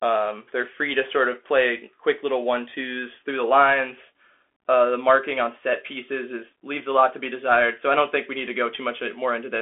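Throughout, the speech carries Bluetooth CVSD headset codec damage: nothing above 3.7 kHz, one-bit delta coding with adaptive step that leaves grainy hiss and scratchy sibilants.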